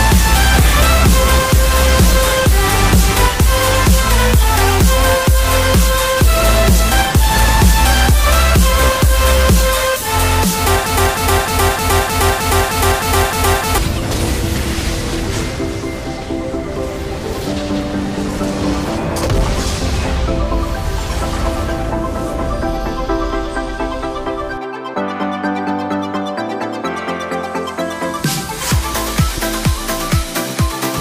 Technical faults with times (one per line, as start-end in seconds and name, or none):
10.86-13.78 broken-record loop